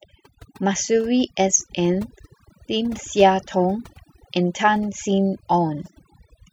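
Throughout the speech, overdone noise removal is audible: the reduction is set so aggressively that frequency bands near the estimated noise floor are pulled down or gated off, taking quiet speech detail with them. Pauses sink to near silence flecked with twinkling artefacts.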